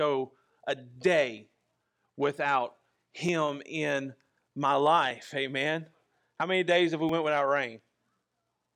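At 1.38 s, 3.29 s (just before "in my"), 4.30 s, 5.11 s (just after "in my") and 7.09 s (just after "many days have we"), the speech jumps abruptly ahead, with no gap of silence. Around 10 ms goes missing at the first, second and fourth points and around 20 ms at the other two. The likely cause is a dropped buffer (overrun): the recording software did not collect the samples in time, the hardware overwrote them, and the audio on either side was joined directly.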